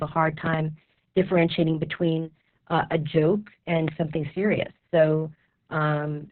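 From start to finish the speech sounds muffled and boxed-in, with a hoarse, buzzy roughness and a faintly robotic character. This is heavy Opus voice compression. The SILK coder has been limited to narrowband, cutting everything above 4 kHz, and has coded the excitation very coarsely. The amount of damage points to a very low bitrate, around 6 kbps, which fits long 60 ms frames.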